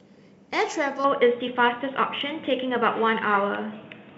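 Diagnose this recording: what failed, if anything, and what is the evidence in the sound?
At 1.04 s the speech turns dull and boxy through to the end, with nothing above 3.8 kHz, a level shift of about 5 dB, and a new noise floor roughly 30 dB down, with no gap. This is likely an input switched to a poorer device at the driver stage.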